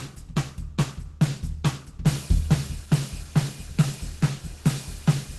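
It's a music clip with plainly audible Opus compression throughout: muffled, hoarse and grainy, nothing above 12.1 kHz, likely a hybrid-mode encode around 16 kbps.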